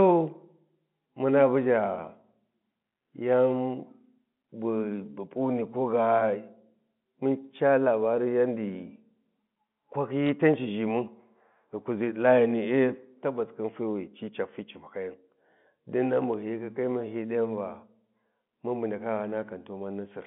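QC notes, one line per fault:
10.27 to 10.29 s, bit errors on a digital phone line: quick cluster of sharp ticks over the speech, consistent with about two hit frames at a low error rate, roughly 0.2 percent. Each flipped bit knocks one mu-law sample off, and sign or high-bit hits click.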